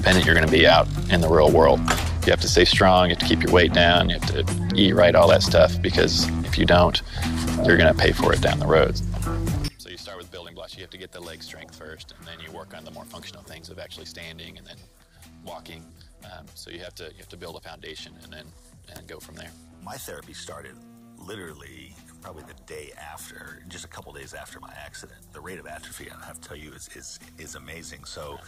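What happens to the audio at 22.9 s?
At 22.9 s the sound sits inside a collapse that runs from 9.68 s to the end: when summed to mono it drops by about 23 dB and turns faint, likely one channel inverted, so everything common to both channels cancels. The waveform shrinks sharply, and the spectrogram darkens.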